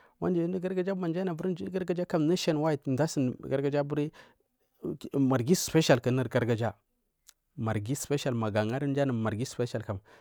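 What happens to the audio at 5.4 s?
Nothing goes wrong at 5.4 s; the speech there plays through cleanly, with no dropout, click, distortion or other disruption.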